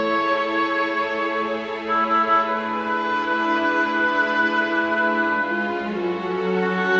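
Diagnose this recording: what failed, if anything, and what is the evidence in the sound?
Nothing stood out on listening; the sound carries the expected marks of call microphone processing, with the lowest bass trimmed and nothing above 8 kHz, and no failure at any stage could be heard.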